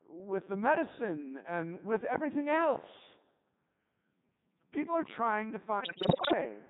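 From start to finish the speech passes through a Codec 2 vocoder, and the damage is heavy. The buzzy, robotic character fits the codec's highest mode, 3.2 kbit/s. No real waveform survives. The decoder rebuilds each frame from sine waves driven by pitch, voicing, energy and a spectral envelope, so the result sounds mechanical. On a spectrogram the harmonics look unnaturally neat and comb-like, the noisy consonant energy is smeared, and the waveform bears no close resemblance to natural speech.

From 5.80 to 6.34 s, right after "are trying to", bit errors on digital voice radio break up the signal. Many bits are flipped at a high rate, roughly one in seven. In this codec every bit helps set a frame's pitch, level, voicing or spectrum, so whole frames decode wrongly. The disruption spans enough frames to suggest a couple of dozen were hit. The sound jumps into bleeps, warbles and gibberish. 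A spectrogram shows harmonic lines leaping in pitch from frame to frame, and the waveform shows abrupt level steps.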